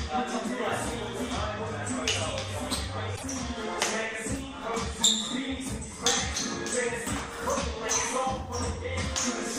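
From 3.12 to 3.23 s, damaged data in the compressed stream derails decoding until the next frame header, leaving a narrow, disrupted vertical strip on the spectrogram.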